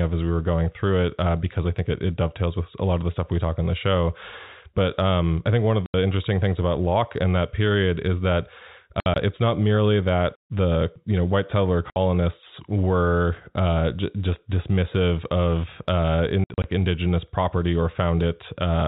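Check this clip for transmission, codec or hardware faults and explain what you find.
The speech has four bursts of packet loss filled with silence, heard through narrowband telephone coding (G.711) that cuts everything above 4 kHz.

At 5.86–5.94 s, 9.0–9.16 s, 11.9–11.96 s and 16.44–16.64 s the audio drops out for 60–120 ms, with the second and fourth gaps broken into scattered runs of up to 60 ms. The gap lengths fit 20 ms packets. Missing packets were replaced by silence, so the waveform shows flat lines with abrupt edges, and the spectrogram shows blank vertical slots.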